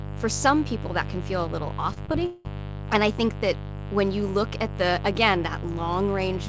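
Throughout, a mains buzz sits roughly 10 dB below the speech: switching spikes at twice the 50 Hz cycle rasp steadily, drawing evenly spaced harmonic lines across the spectrogram.

From 1.94 to 2.47 s, repeated packet loss leaves four gaps, the longest 186 ms, patched by stretching earlier sound. The result is choppy and robotic, with pieces missing.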